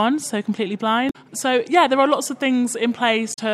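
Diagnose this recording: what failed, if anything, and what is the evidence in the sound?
Two short glitches break into the sound, from 1.07 to 1.16 s and again from 3.30 to 3.39 s, each lasting about 90 ms. This is damaged data in a compressed stream, a fault at the codec stage. A stretch of the encoded bitstream was corrupted, so the decoder misread the frames there, lost sync and hunted for the next valid frame header. The brief disruption it produced while resynchronising is what comes through as the glitch.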